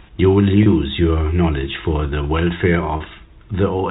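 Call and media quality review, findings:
Packet loss with pitch repetition at 0.63 s and 2.97 s, about 30 ms each, consistent with one lost packet per event. Concealment repeats the last pitch period through each gap, giving a brief held, buzzy smear in the speech on the G.711 A-law telephone-band path.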